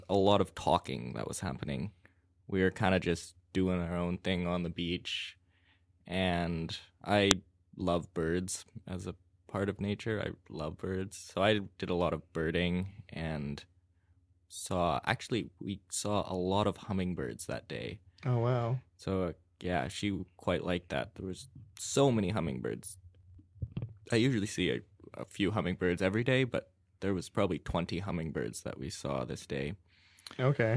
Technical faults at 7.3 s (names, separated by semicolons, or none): file header played as audio